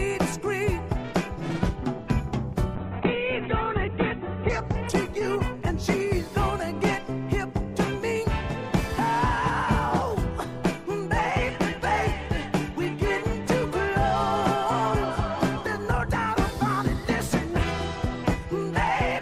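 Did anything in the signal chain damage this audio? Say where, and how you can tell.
Yes, a call bitrate drop hit the codec stage between 2.77 and 6.83 s. The bandwidth estimate fell and the encoder was forced from full rate down to a starvation level, which fits a fall from about 64 kbps to 8 kbps. The audio's top end collapses from about 20 kHz to 4 kHz, so it turns muffled and coarse, with a watery, rough texture worst for about 1.7 s before the rate recovers.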